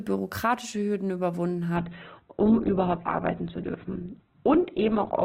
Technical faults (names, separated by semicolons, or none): adaptive stream at a lower bitrate